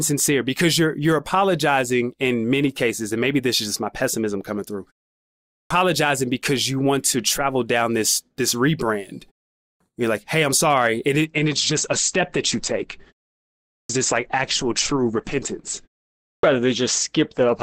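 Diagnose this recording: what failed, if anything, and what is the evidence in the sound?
Playback device waking up: after short pauses, onsets at 5.42, 9.53, 13.58 and 16.12 s arrive clipped, with about 0.27 to 0.31 s swallowed while the output relocks.

Network-driven adaptive stream at a lower bitrate: from 11.25 s to the end, everything above 8.7 kHz vanishes and codec artefacts thicken, consistent with a switch down to roughly 16 kbit/s Opus.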